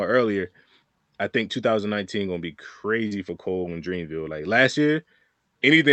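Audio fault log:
3.07–3.13 s, short concealed packet loss: just after "gonna be", about 40 ms of the call arrived too late and the decoder synthesised a stand-in by extending the preceding sound, giving a brief smear. On a spectrogram, harmonics flatten or blur before the stand-in blends back into the real audio.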